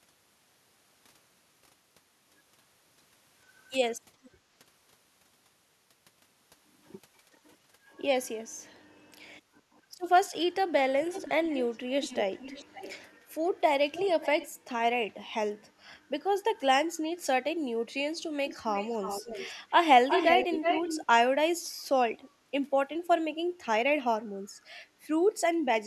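Echo leak appears at 4.23–4.30, 11.04–11.78, 12.01–13.18, 13.46–13.50, 13.93–14.48, 18.44–18.57, 18.74–19.52 and 20.08–21.06 s. These are delayed copies arriving 440, then 520, then 360 ms late, ranging from about −40 dB to roughly equal level. They most likely come from a loudspeaker pickup the far end's echo canceller missed. On a spectrogram they show as shifted duplicates of the harmonic traces.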